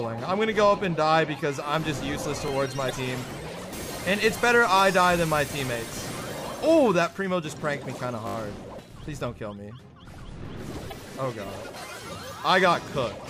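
At 2.48 to 2.50 s there is a repeated buffer. New audio arrived late, so the device replayed the last 20 ms block once more. The join is hard, with no crossfade. With a block this short, the doubling is heard as a small click or tick rather than a clear stutter. Playback then resumes where it left off, with essentially nothing skipped.

At 2.86 to 2.91 s comes damaged data in a compressed stream. Some bytes in the encoded stream are wrong there. The decoder misreads those frames and loses sync. It must hunt for the next valid frame header before decoding cleanly again. For about 40 ms the sound turns into a short chirp or blip that has nothing to do with the material around it.

At 8.27 to 8.35 s the repeated buffer returns, and it is worse. The same 20 ms block plays four extra times, back to back. The repeats come every 20 ms, a rate of 50 per second. So the stutter fuses into a brief buzz lasting about 80 ms. 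No audio is lost, so what follows carries on where it left off.

At 10.88 to 10.93 s the damaged compressed data strikes again. The decoder once more misreads corrupted frames and must resynchronise. It produces another squawk-like blip of roughly the same length as the first.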